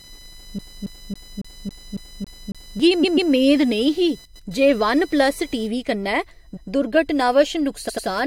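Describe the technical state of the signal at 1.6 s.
At 1.6 s the signal sits inside a CD stuck on one turn fault running from 0.59 s to 2.80 s. A damaged spot keeps sending the pickup back a track, so one 0.28 s slice of speech plays eight times in a row, each pass ending in a brief mute at the jump, until playback breaks free just before "मेद नेईं ही जे". On the waveform this looks like a block of identical envelopes repeating at a steady period. The spectrogram shows the same pattern cloned side by side, split by thin vertical gaps.

Under this, and through the whole clip, runs computer activity noise. Shifting current draw from the processor or graphics hardware disturbs the audio circuit's shared ground and puts a buzzy, scratchy pulse train at around 1 kHz into the signal, roughly 30 dB below the speech. It rises and falls with the machine's load, not with the talking. The spectrogram shows a comb of fine harmonic lines spaced about 1 kHz apart. 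On the waveform it is a grainy layer that stays visible in the quieter stretches.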